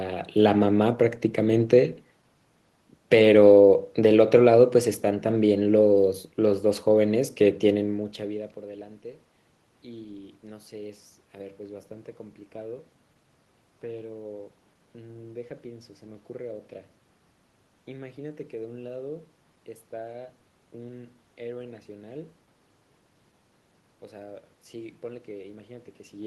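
There are no technical faults to describe in this speech recording.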